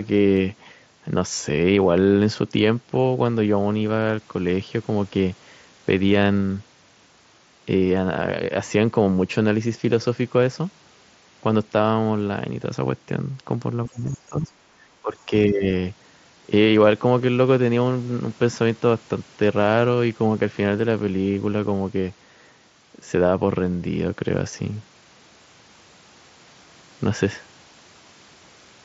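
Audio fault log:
13.85–14.61 s and 15.02–15.73 s, speech suppressed in double talk: the voice sags twice in quick succession. The first dip goes deep, about 30 dB at its worst, and takes out most of that stretch. The second is shallower, about 15 dB, and lasts a bit under half a second. The likely cause is the other side talking over it: the echo canceller couldn't tell the near talker from the loudspeaker echo and clamped down on both.
20.40 s, concealed Bluetooth headset packet loss: a tiny blip of about 7.5 ms, which fits a single lost frame between headset and phone. The receiver filled the gap by repeating a matching bit of the waveform just before it, so it's almost invisible. It sits within the 8 kHz-wide mSBC sound.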